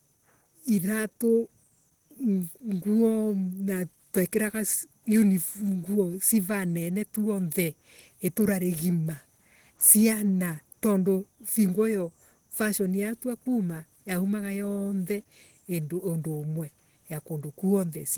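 Opus compression runs through the whole of this speech recording, from start to finish. The audio has a plainly audible hoarse, grainy roughness, with a muffled quality in the body of the sound. That points to the likely cause, a low-rate Opus encode in its hybrid mode, where a speech-oriented layer codes the lower band and band energies are rebuilt above it, consistent with roughly 16 kbps. The bandwidth stays fullband, extending to about 20.1 kHz.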